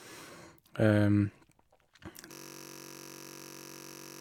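At 2.32 s the speech stops dead and turns into a system hang loop that runs right to the end. The machine or its audio driver has frozen, but the sound hardware keeps replaying the same ring buffer. A single 21.33 ms slice repeats nearly ninety times, which fits a 1024-sample buffer. Because the slice is so short, you don't hear a stutter. You hear a steady buzz at about 46.9 Hz.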